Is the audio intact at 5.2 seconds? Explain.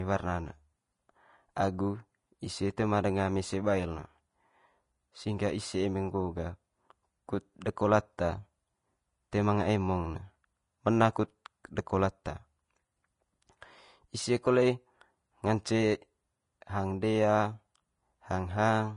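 No. Vorbis compression runs through the whole clip, including 5.2 seconds, and it is plainly audible. The sound points to a low bitrate, around 31 kbps, likely from this codec: nothing survives above 10.5 kHz, and the treble is quantised so coarsely that its detail turns to grainy, hissy noise, roughening tones and softening consonant attacks.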